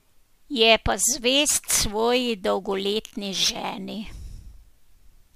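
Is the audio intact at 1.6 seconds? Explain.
No. From 1.49 to 4.28 s the speech carries a gritty, inharmonic fizz, about 15 dB below the voice, that tracks its louder and brighter parts. This is crude rate conversion: samples dropped without filtering, which fits a nearest-sample change from 48 kHz to 44.1 kHz.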